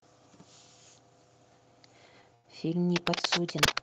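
At 2.34 s the speech hangs for about 93 ms, until 2.46 s, in a short stall from a late packet: the jitter buffer emptied, so the last sound was stretched with a slight buzz or dip, then resumed in the same place. Nothing is skipped, unlike a dropout. From 2.96 s to 3.79 s, dense, uneven scratching, a little louder than the speech, rides over it. This cable scratch noise likely comes from a worn cable or connector being moved. It is irregular rustle, not steady hiss, and the call path cuts off above 8 kHz.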